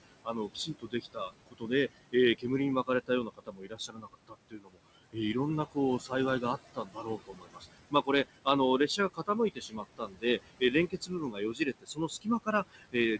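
A speech recording with noise suppressor artifacts throughout. The suppressor pulls the room noise down by about 21 dB, so it pumps between phrases. Speech is also cut by the noise suppressor in six stretches: 0.03 to 1.71 s, 2.12 to 2.45 s, 2.86 to 5.35 s, 5.72 to 6.43 s, 6.75 to 8.47 s, and 8.88 s to the end. Quiet sounds there are mistaken for noise and dropped by up to about 22 dB, so endings and soft consonants sound swallowed.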